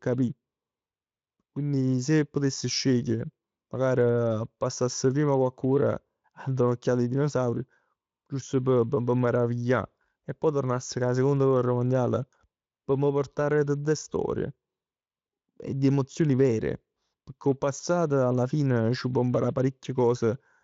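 No faults are audible in the speech; the Speex coding leaves nothing above about 7.6 kHz, which fits its wideband mode at a high quality setting.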